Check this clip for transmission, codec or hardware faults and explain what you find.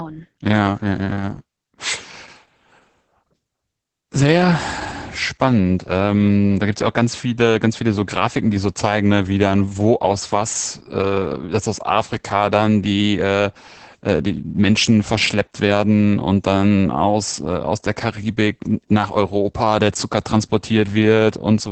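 One codec fault runs through the whole clip. The speech has passed through Opus voice compression at a very low rate, in its linear-prediction SILK mode. The band stops near 8 kHz, and the excitation is coded coarsely. The speech sounds muffled, hoarse and faintly robotic, which fits a bitrate of roughly 10 kbps.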